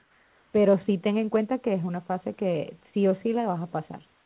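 Comfort noise in place of the background at 0 to 0.53 s and 4.13 s to the end of this speech clip: the room tone becomes a flat, featureless hiss, about 3 dB and 2 dB quieter. This is likely discontinuous transmission, with the receiver synthesising noise while no speech is sent.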